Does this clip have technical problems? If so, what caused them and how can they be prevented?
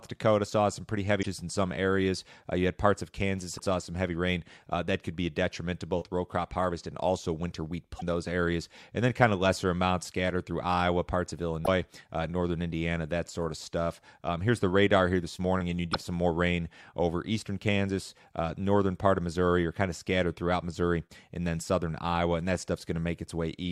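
Yes: damaged data in a compressed stream. Corrupted bytes make the decoder misread frames and lose sync, producing brief glitches in the speech at 1.19–1.26, 3.54–3.60, 7.96–8.03, 11.61–11.68 and 15.90–15.95 s. Checksummed transport and verified file copies would prevent it.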